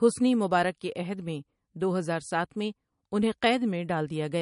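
Throughout the speech, the treble stops dead at 10.6 kHz and the sound is plainly watery, with swirling, chirpy sibilants and smeared attacks, likely from MP3 compression at a low bitrate, roughly 40 kbps. A spectrogram shows a flat ceiling plus flickering, patchy high-frequency blocks.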